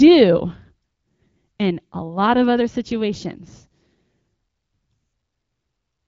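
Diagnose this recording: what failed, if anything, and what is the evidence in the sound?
No fault detected.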